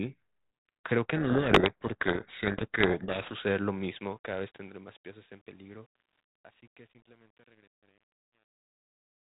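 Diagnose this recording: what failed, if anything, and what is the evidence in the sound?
At the codec stage, a codec payload misread buries the speech in harsh distortion from 1.16 to 3.34 s. The telephone band and level behaviour point to G.726 at 32 kbit/s, with code words read in the wrong bit order. On a spectrogram, dense broadband grit replaces harmonic structure below 4 kHz.

In sample-format conversion, truncation distortion on a fade appears from 3.71 s, during the smooth fade-out. The fade keeps too few bits and adds no dither, which fits a stage of roughly 9 bits. From 4.68 s to the end, the quiet tail turns gritty. The waveform shows coarse square steps.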